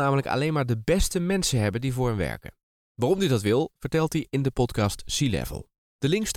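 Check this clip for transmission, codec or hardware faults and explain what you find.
Nothing to flag here: I listened to the whole speech recording and found no fault from the transmission path, the codec or the hardware.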